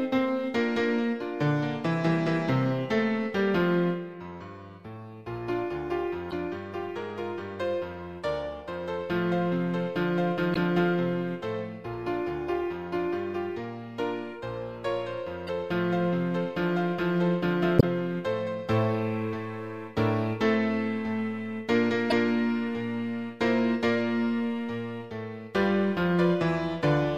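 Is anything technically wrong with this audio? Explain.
Yes. Damaged data in a compressed stream appears at 6.29 to 6.34 s, 10.52 to 10.57 s, 15.47 to 15.49 s, 17.76 to 17.84 s and 22.10 to 22.13 s. Corrupted bytes make the decoder misread frames and lose sync until it finds the next frame header, so each spot is a brief chirp or blip in the audio.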